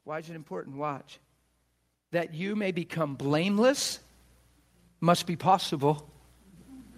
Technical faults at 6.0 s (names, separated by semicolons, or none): none